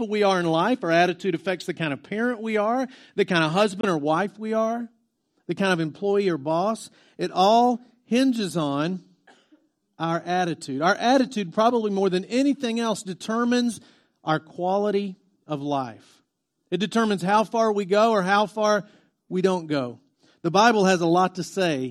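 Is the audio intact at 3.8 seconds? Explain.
No. At 3.81 s the link likely failed to deliver audio packets to the headphones in time, a Bluetooth dropout, and the late data was discarded rather than played. The output goes silent from 3.81 to 3.85 s, a hole of about 23 ms that fits a single lost frame. The gap has abrupt edges or a fade of a few milliseconds, and the speech picks up afterward as though it had kept running, so that slice of sound is missing outright.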